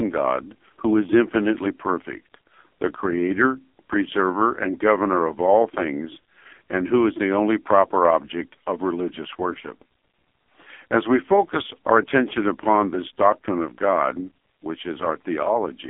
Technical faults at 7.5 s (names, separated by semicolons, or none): AMR narrowband mobile codec